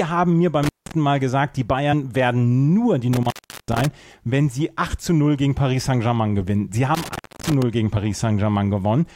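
A speech recording with two kinds of trouble. There's an intermittent contact three times, at 0.63 to 0.92 s, 3.13 to 3.85 s and 6.95 to 7.63 s. A loose plug or cable opens for roughly 176, 378 and 296 ms, so the sound drops out with crackle at each edge and just faint hiss in the gap. Separately, two quick blips at 1.92 s and 7.96 s are damaged data in the compressed stream: corrupted frames throw the decoder off until it finds the next good frame header.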